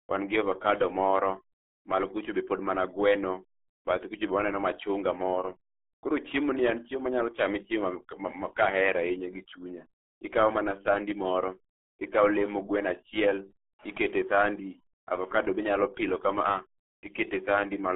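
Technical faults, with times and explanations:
Throughout, RealAudio 14.4 codec: muffled, gargly speech with nothing above 3.8 kHz, heavy coding damage that fits an 8 kbit/s dial-up-era speech codec.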